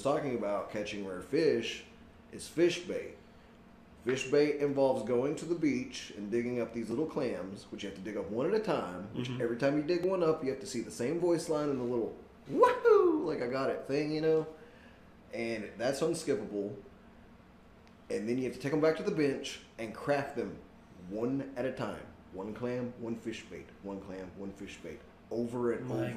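At 6.91 s and again at 10.03 s there is a brief tick, each one a block of digital silence only 2 ms long. The sound drops straight to silence and returns with no fade, so both edges land as hard discontinuities that fuse into a single click rather than an audible hole. A gap this short points to an output buffer that was not filled in time, leaving a short run of silence.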